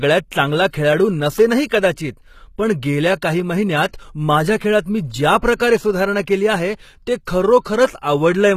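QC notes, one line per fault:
Throughout, HE-AAC compression: the speech was likely passed through a low-bitrate HE-AAC v2 encoder, and the damage is plainly audible, which fits a bitrate around 20 kbps. Only the lower spectrum is coded. The treble is rebuilt by copying lower bands upward under a coarse envelope, so its harmonics no longer line up with those below the crossover. S sounds come out gritty, metallic or lispy, and nothing remains above 14.9 kHz.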